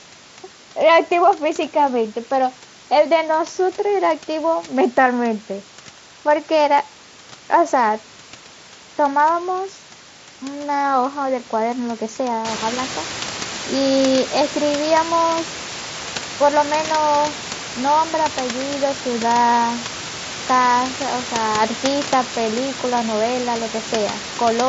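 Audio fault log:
No faults found in this speech recording.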